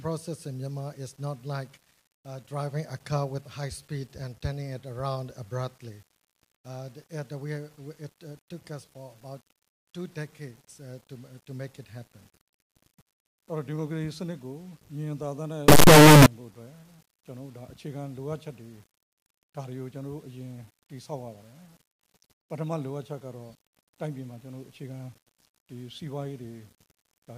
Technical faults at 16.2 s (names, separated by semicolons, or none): signed and unsigned mixed up